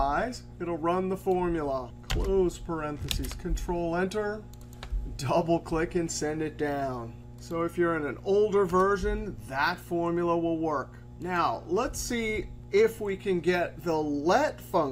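From start to end, mains hum sits under the audio: power-line current leaking into the signal path through a ground loop or nearby transformer, heard as a steady 60 Hz tone with some low harmonics, about 20 dB below the signal. Its fixed pitch and constancy set it apart from broadband low-frequency rumble.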